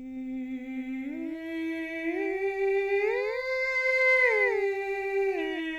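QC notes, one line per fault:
Throughout: doubled audio track. The music is heard twice, with a second full-band copy trailing by about a fifth of a second at roughly 5 dB lower, with no reverberant tail or room colouring. The likely cause is a duplicate capture through a slower path. On a waveform every transient is followed by a smaller, identically shaped twin. A spectrogram shows each onset repeated a fixed distance later.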